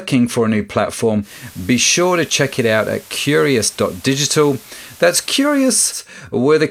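At 1.21 s the speech blends from digital radio to analogue FM over about 108 ms. The receiver lost its digital stream and switched to the analogue broadcast. Hiss rises, well below the voice. Level drops about 1 dB. It blends back at 6.02 s.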